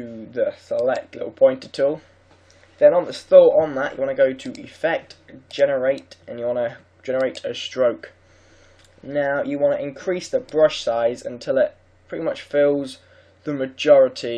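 No technical faults occur at any point in the audio.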